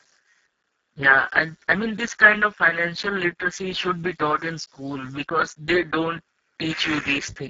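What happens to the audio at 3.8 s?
Speex codec damage runs through the whole clip, so at 3.8 s the speech sounds hoarse and noisy. Very few bits are left to code the excitation, which fits a rate near 6 kbps. The band tops out around 7.7 kHz.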